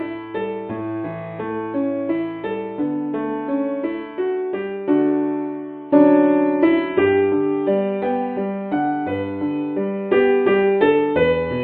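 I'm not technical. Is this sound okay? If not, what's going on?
No. There are two problems.

The first is a channel delay, which causes comb filtering, and it runs through the whole clip. One side of the stereo signal arrives a tiny fraction of a millisecond after the other. When the two are mixed together, some high frequencies cancel out, starting at around 7 kHz. The sound loses some sparkle and gets a slightly hollow, phasey edge.

The second is an adaptive stream dropping to a lower bitrate, from 5.56 to 7.56 seconds. The connection likely slowed, so the player switched to a lower-quality copy. During those two seconds, everything above about 4.9 kHz disappears. The sound turns suddenly dull and muffled, with some smeary, watery texture. There is no gap. The quality just drops, then jumps back up.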